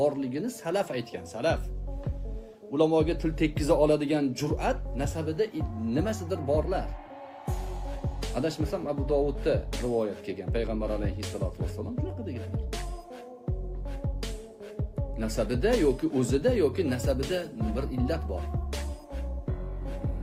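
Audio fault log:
16.70–20.23 s, adaptive stream at a lower bitrate: from 16.70 s to the end, the audio suddenly takes on a smeared texture, with coding artefacts more audible, yet there is no gap or dropout. This is the player switching to a lower-bitrate version of the stream mid-playback, and the drop in quality fits a step from roughly 64 kbit/s Opus down to about 24 kbit/s.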